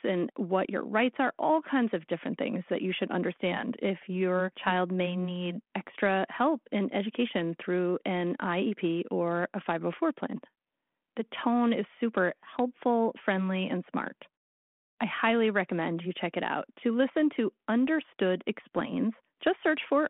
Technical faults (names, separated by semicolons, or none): bit errors on an ADPCM link